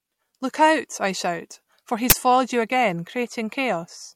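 At 2.10 to 2.12 s, between "I shout for" and "foiled you again", the speech is interrupted by an uninitialised buffer fault. A playback block was sent to the output before any audio had been written into it, so whatever stale data sat in that memory was read out as samples. The result is a brief, harsh burst of loud digital noise lasting about 20 ms, which fits a single 20 ms block.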